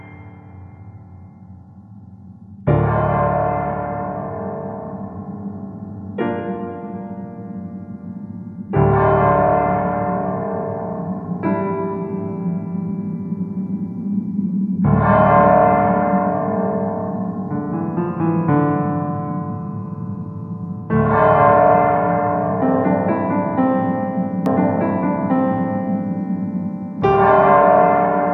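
From 24.46 s to the end, a doubled audio track: an equally loud, full-band copy trails about 1.5 s behind. Unlike echo it starts abruptly and never decays, likely from a second, slower capture path.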